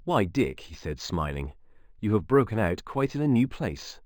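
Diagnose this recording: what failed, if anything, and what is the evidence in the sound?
Sample-rate conversion failed: imaging from linear upsampling throughout the speech. Straight-line interpolation from 11 kHz to 44.1 kHz dulls the top and leaves mirrored copies between 5.5 and 11 kHz, roughly 30 dB down, a faint shimmer on sibilants. Aliasing would instead fold content downward.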